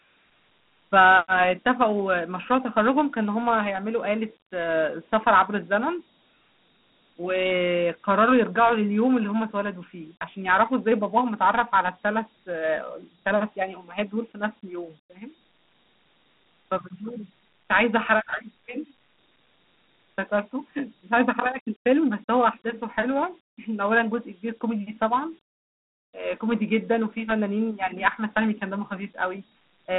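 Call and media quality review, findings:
Dialogic VOX ADPCM throughout: telephone band from 150 Hz to 3.6 kHz, nothing above 3.9 kHz, plainly audible gritty hiss tracking the speech. The 4-bit adaptive step size makes the grit swell with level, which fits a 32 kbps OKI stream; band-limiting alone would sound clean.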